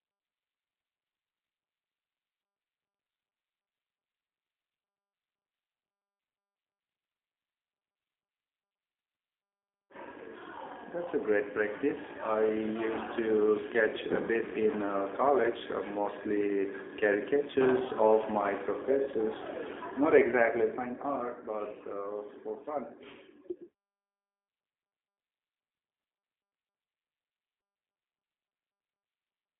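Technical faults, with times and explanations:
Throughout, G.729 codec: nothing reaches above about 3.7 kHz, and the low end rolls away below roughly 250 Hz, leaving a narrow telephone band. The speech has a plainly audible rough, buzzy, synthetic edge, consistent with a G.729-family coder at around 8 kbit/s. That coder discards the waveform and resynthesises each 10 ms frame from a vocal tract filter, a pitch predictor and a few sparse pulses, so fine detail between pulses is lost.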